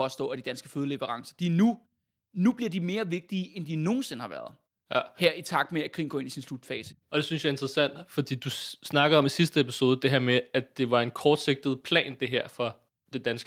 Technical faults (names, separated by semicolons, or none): none